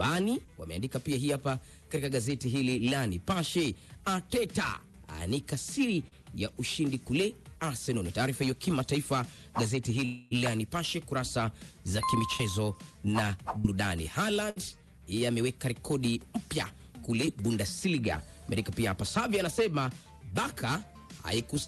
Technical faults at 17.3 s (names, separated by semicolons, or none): short concealed packet loss